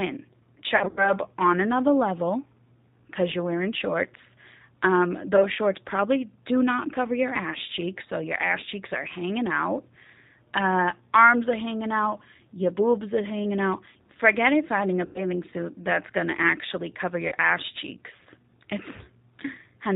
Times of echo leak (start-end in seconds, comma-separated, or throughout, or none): none